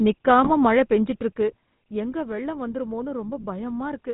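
The whole clip of speech runs through a GSM full-rate codec, with a buzzy, gravelly roughness and nothing above 4 kHz, which fits the old 13 kbps GSM coder. Then from 0.44 to 0.50 s you get GSM bit errors: corrupted bits hit the decoder's filter, pitch and gain values across a few frames, so the voice squawks and gargles briefly.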